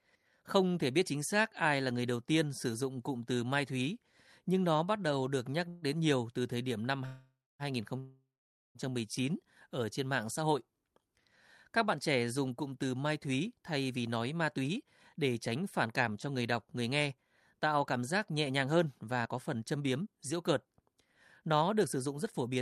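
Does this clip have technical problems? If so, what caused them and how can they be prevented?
Yes. There are three call audio freezes: 5.68 to 5.85 s, 7.06 to 7.62 s and 7.99 to 8.78 s, lasting 138 ms, 534 ms and 756 ms. In each, the last sound carries on as a fading buzz, ending in silence for 220 ms in the second and 470 ms in the third. Packets were likely stalled in transit, so the jitter buffer emptied and the receiver padded the gap before resuming where it left off. Less network congestion or a deeper jitter buffer would prevent this.

Jitter buffer speed-up follows, from 13.45 to 20.95 s at about 108% speed and from 21.42 to 22.57 s at about 109%. The pitch stays the same while the speech sounds hurried. After the earlier delays, the buffer held more than its target, so the receiver trimmed short pitch-period segments repeatedly, removing roughly 0.7 s and then a tenth of a second. 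A gentler, slower catch-up policy in the buffer would make the drain less audible.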